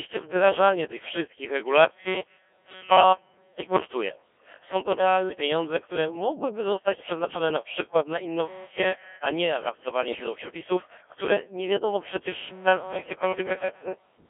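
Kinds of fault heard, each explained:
Codec 2 vocoder: a 1.3 kbit/s vocoder sends only pitch, voicing and spectral envelope, rebuilding speech from sine waves, so the voice sounds robotic, buzzy and confined to 300 Hz–3.4 kHz.
Bit errors on digital voice radio: about 2% flipped bits corrupt two frames between "a nie" and "do przepisów które nie", making the synthetic voice briefly warble and jump in pitch near 10.1 s.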